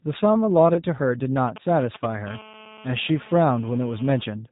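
A G.729 codec at 8 kbit/s carries this speech throughout. It rebuilds each 10 ms frame from a vocal tract filter, a pitch predictor and a few pulses, so nothing above 4 kHz survives and the voice sounds plainly rough and synthetic. Between 0.74 and 0.81 s, one lost 20 ms packet forces the decoder into packet loss concealment. It extrapolates from its last pitch and filter state and then has to rebuild from that guess, so the speech smears briefly into a fading, stretched sound and stays weak or distorted for a while after real frames return. From 1.47 to 2.29 s, GSM signalling bursts from a nearby 2G phone are picked up and rectified by the audio circuit. They come through as a galloping dit-dit-dit of short 217 Hz buzzes, roughly 15 dB below the speech.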